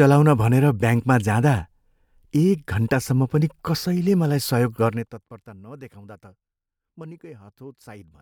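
No technical faults are audible anywhere in this speech recording.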